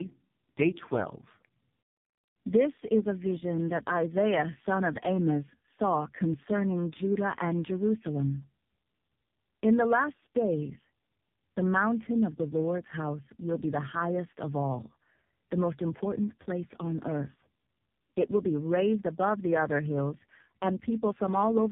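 From start to finish, the call crossed links that each applied their own speech codec, so the speech was decoded and re-encoded at each border. This is tandem speech coding. The rough, smeared texture fits two such coders in series, likely a G.723.1 link followed by AMR-NB, with a plain G.711 hop between them. The second coder had to model the first one's artefacts as well as the voice, so the errors compound. The result sounds rougher and more warbly than either codec would alone, and it is muffled, with nothing above 3.8 kHz.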